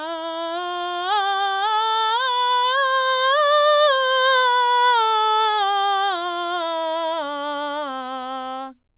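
Nothing goes wrong anywhere in this music, which came over a call line using G.711 mu-law at 64 kbps, so it just has that codec's narrow sound with nothing above 4 kHz.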